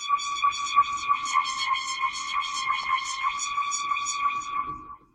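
A short break, with the sound lurching forward, comes at 1.31 to 1.34 s and again at 2.83 to 2.85 s. These are compressed frames skipped: a few whole frames, then several, never played, cutting around 70 ms and then about a tenth of a second, consistent with 20 ms frames.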